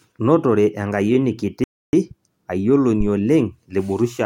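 At 1.64 s the speech cuts out in mid-flow and the output stays silent for about 0.29 s, resuming at 1.93 s. This is a playback stall: the gap sounds like the audio simply freezing rather than fading. The likely cause is that the player ran short of buffered data, or its audio thread was held up, so nothing reached the output until it caught up.

At 3.00 s a deep, low thump breaks in, decaying over roughly 20 ms, with the disturbance ending by about 3.10 s. This is a phantom power thump. A supply being switched on a live input sends a sudden voltage step through the coupling capacitors, and that step is heard as a brief low-frequency knock.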